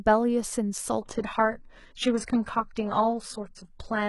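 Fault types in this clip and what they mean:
Adaptive stream at a lower bitrate: a slowed connection forced a switch to a much leaner stream, so from 1.02 s the speech's treble abruptly turns synthetic, with no gap.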